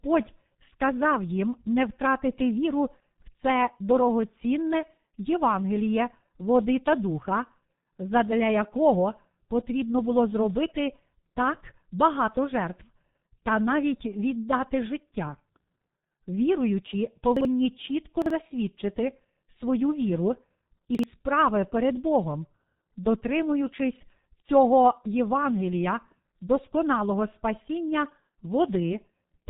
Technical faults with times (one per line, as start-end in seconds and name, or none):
0.00-29.49 G.723.1 codec
17.37-17.45 chunks out of order
18.22-18.30 chunks out of order
20.95-21.03 chunks out of order